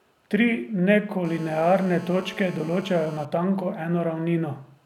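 GSM phone buzz runs from 1.25 s to 3.25 s in this speech. A 2G phone on a call close to the recording chain sends radio bursts 216.7 times a second, and the audio circuitry rectifies those pulses into the signal. The result is a hard, raspy buzz pitched at that burst rate, rich in harmonics and unrelated to the speech, holding steady for its full two seconds at about 18 dB below the speech level.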